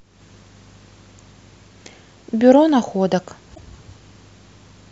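At 3.54 s the speech jumps forward and the next 0.04 s or so comes out garbled. This is likely a broken MP3 bit reservoir: frames were cut from the stream, so the following frame borrowed bytes from a neighbour that no longer matched and decoded them as junk. The 44 ms disturbance spans under two frames of about 26 ms.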